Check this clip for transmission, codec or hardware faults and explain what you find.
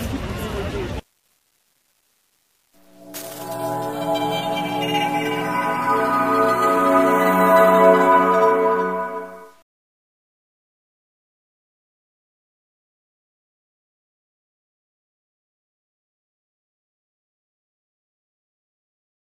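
One fault runs through the whole clip: low bit depth without dither. Quiet passages sound grainy, and the grit tracks the sound, roughly 40 dB below the signal. This is likely truncation to about 9 bits with no dither, so the rounding error follows the waveform and the faintest parts sputter or drop out.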